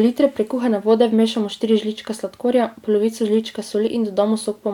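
No technical faults are audible.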